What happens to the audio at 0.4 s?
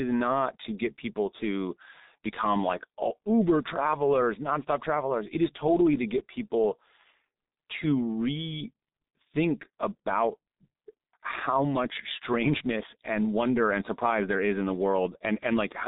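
At 0.4 s the speech is already running through the G.723.1 codec, and that damage lasts the whole clip rather than starting there. The codec squeezes the signal into coarse 30 ms frames with a sluggish voice model, which fits a bitrate near 6 kbit/s, so the speech sounds muffled and hoarse with smeared consonants. A spectrogram shows a hard ceiling at 3.8 kHz with nothing above it, and blocky, frame-stepped texture below.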